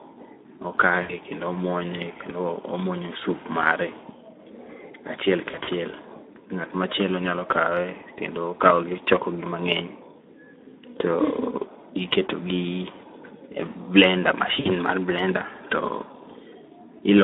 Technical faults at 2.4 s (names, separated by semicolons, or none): Speex codec